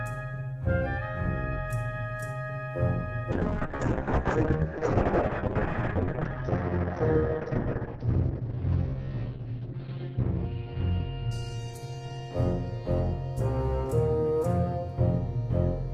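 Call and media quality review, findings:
Call bitrate drop, 3.32–13.61 s: encoder starved after bandwidth estimate fell; band shrinks 20 kHz to 6 kHz, watery, coarse. Continuous, no gaps, unlike packet loss.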